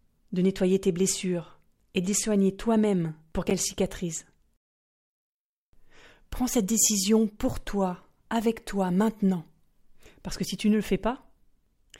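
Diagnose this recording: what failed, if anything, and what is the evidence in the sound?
Chunks out of order at 3.47 to 3.51 s, in the driver or buffer stage: a 10 ms chunk plays three chunks late, after the ones that should follow it. That brief stretch of speech sounds jumbled, with three hard joins.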